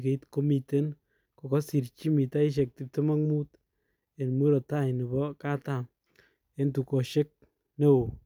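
No technical faults can be heard anywhere in the recording, with the signal holding steady and continuous throughout.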